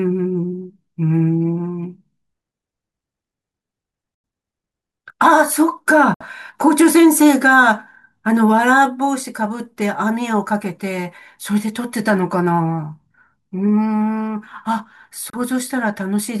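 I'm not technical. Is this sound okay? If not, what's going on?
No. The speech briefly cuts to silence three times, at 4.15 to 4.24 s, 6.14 to 6.26 s and 15.30 to 15.37 s, then carries on as if it had kept playing. This is likely a Bluetooth dropout: sound didn't reach the headphones in time.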